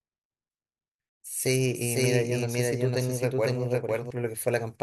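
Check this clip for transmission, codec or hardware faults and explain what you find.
One fault is present: a doubled audio track from 1.7 s to 4.1 s. In that span the speech is heard twice, with a second full-band copy trailing the original by around half a second at roughly the same level. The likely cause is the signal being captured again through a slower path, or an edit leaving two copies out of step. The copy carries no decay or room colouring, and it cuts in and out abruptly at both ends.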